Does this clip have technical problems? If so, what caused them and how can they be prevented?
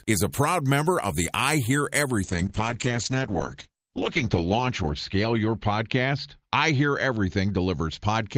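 Yes. There is a call bitrate drop from 2.24 s to the end. The encoder's rate falls from 32 kbps to 8 kbps, and it sits at the lowest rate for about 2.2 s. The bandwidth estimate fell, so the codec had far fewer bits. It coded the speech coarsely and narrowed the audio band from 20 kHz to 8 kHz. The speech turns muffled and rough. Prevent it by giving the call a stable, uncongested network path with enough headroom.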